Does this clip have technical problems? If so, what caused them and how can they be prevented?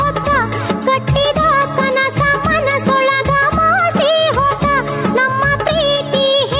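Yes. Gain pumping runs throughout. The level ducks by about 5 dB under loud sounds, likely from excessive mic gain driving a fast limiter.

To prevent it, lower the microphone gain so the limiter rarely engages.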